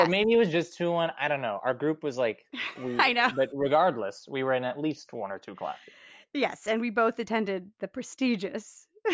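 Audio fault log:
Nothing to log here; the speech comes through without any fault to note.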